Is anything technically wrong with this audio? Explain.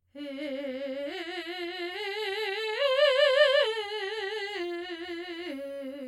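Yes. Throughout the music the sound is rough and slightly doubled, a quality that never changes. This is channel delay (comb filtering): one channel arrives roughly 20 ms behind the other, and when the two are summed to mono, material common to both cancels at evenly spaced frequencies. With a delay that long, the first notch falls around 20 Hz and the notches sit only a few tens of hertz apart, combing through the whole spectrum.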